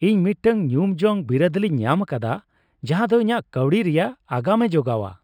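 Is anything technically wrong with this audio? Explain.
Yes. The whole speech clip shows imaging from linear upsampling, which fits 12 kHz audio raised to 44.1 kHz by straight-line interpolation. This weak filter dulls the top below 6 kHz and leaves a faint mirrored band between 6 and 12 kHz, roughly 40 dB down, that adds a metallic shimmer to sibilants. On a spectrogram it appears as a faint reflection above a softened 6 kHz edge.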